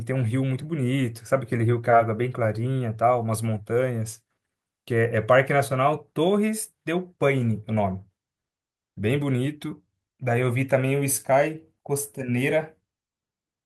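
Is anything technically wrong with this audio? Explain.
No, nothing technical stands out here; it's just speech, and there's no fault to point to anywhere in it.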